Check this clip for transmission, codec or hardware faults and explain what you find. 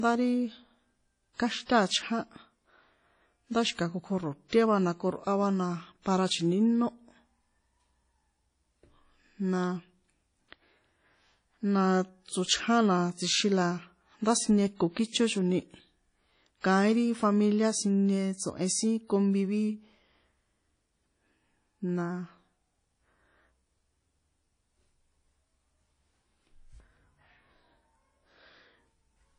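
Two codec faults are audible in this speech clip.

Throughout, likely WMA compression: long transform blocks at a bitrate that sounds around 32 kbps leave plainly audible ringing, washy hiss, and nothing above 10.1 kHz.

Pre-echo at 1.65–1.69 s and 4.49–4.52 s, just before "va na": block-spread quantisation noise runs ahead of sharp attacks, adding a 35–40 ms hiss and softening each onset.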